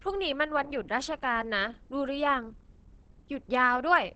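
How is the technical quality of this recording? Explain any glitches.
Quality is limited by plainly audible compression damage. Throughout, the speech sounds muffled and hoarse, with nothing above 8.5 kHz. This is likely Opus compression in its speech mode, fitting a low rate near 16 kbps.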